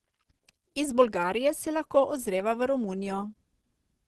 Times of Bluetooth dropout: none

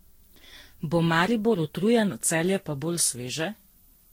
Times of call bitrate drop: none

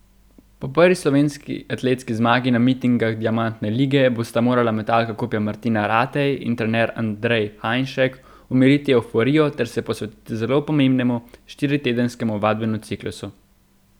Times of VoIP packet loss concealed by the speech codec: none

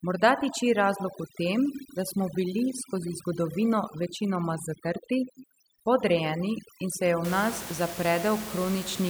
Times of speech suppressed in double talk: none

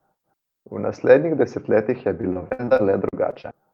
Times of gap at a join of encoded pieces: none

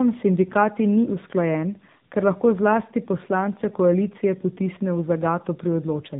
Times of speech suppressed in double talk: none

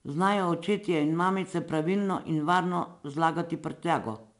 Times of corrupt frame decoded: none

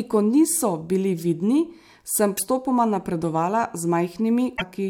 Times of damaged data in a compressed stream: 2.34-2.40, 4.53-4.62

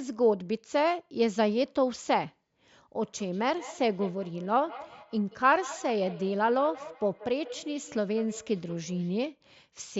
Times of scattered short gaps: none

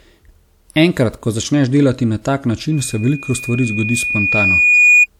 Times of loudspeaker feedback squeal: 2.71-5.06

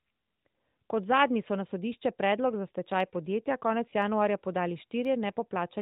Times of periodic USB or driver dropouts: 1.98-5.05

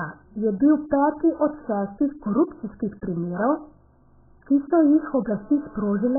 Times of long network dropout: none

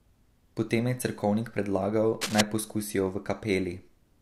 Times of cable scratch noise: 2.21-2.41

